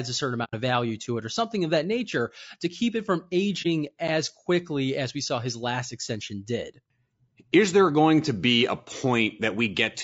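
Throughout the clip the speech sounds rough and grainy, with a hiss-like fill between the voice harmonics and a thin, somewhat artificial top band. This is most likely low-delay AAC compression, a codec of the AAC-ELD type, and the damage is plainly audible, which fits a rate around 32 kbps. This graininess sets it apart from the underwater swirl of ordinary low-rate AAC.

At 0.44 s, between "a certain" and "of value to it", there is AAC frame loss with muting. The sound fades to silence for about 0.1 s and fades back in, which fits roughly three lost frames whose spectra the decoder set to zero. At 3.62 s, between "to keep it from" and "as quickly as we", a shorter hole of about 30 ms points to a single lost frame. The overlapping windows soften both edges. That soft fade distinguishes them from hard dropouts, and the plain silence distinguishes them from concealment that fills the gap.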